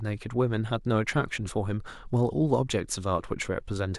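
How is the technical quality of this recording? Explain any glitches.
No glitches or faults detected.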